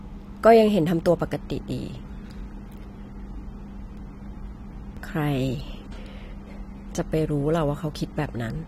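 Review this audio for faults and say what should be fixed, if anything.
Short skips in the speech at 0.99, 1.99, 3.97, 4.97 and 7.95 s, each a few milliseconds long and butted together with no gap. The one-second spacing points to audio missing between chunks, likely lost while 1.0 s processing blocks are closed and reopened. To prevent it, buffer continuously across block boundaries so no samples are dropped during the handover.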